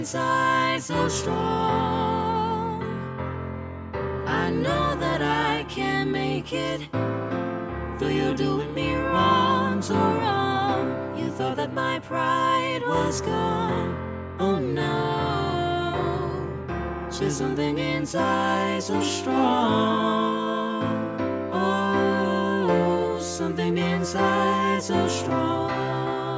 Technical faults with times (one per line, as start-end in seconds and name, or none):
none